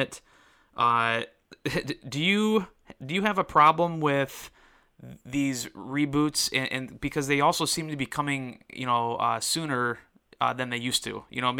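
No technical faults can be heard anywhere in this recording of speech.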